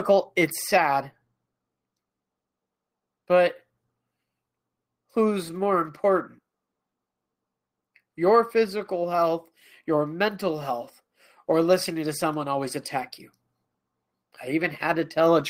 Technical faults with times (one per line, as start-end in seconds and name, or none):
none